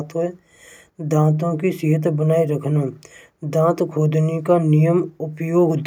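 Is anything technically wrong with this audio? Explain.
No, nothing technically wrong stood out on listening to this speech recording.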